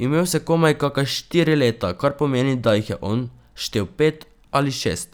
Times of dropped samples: 2.69

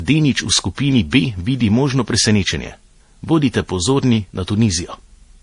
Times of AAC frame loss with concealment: none

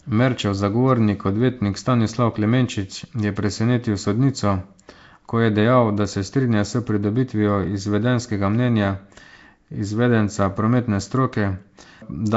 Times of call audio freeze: none

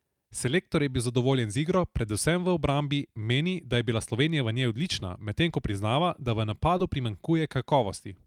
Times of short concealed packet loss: 6.77-6.81

